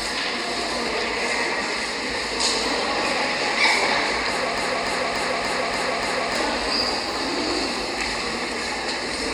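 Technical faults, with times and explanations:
4.58–6.35 s: broken-record loop. A 0.29 s fragment repeats exactly, back to back, six times, and the sound that should have filled those 1.8 s is lost. The player, encoder or stream likely stalled and kept resending its last buffered fragment.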